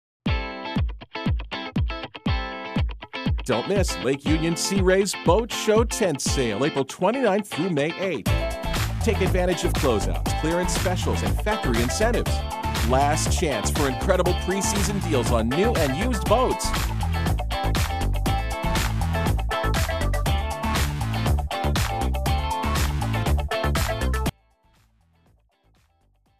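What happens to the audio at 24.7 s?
At 24.7 s the audio is inside an audio dropout to a faint residue that starts abruptly at 24.30 s and runs to the end. The wanted signal has likely been lost while the path stayed live, leaving only a faint leak roughly 35 dB down. On a waveform it shows as a sudden collapse to a thin trace, and on a spectrogram as a sharp vertical edge into near-empty bands.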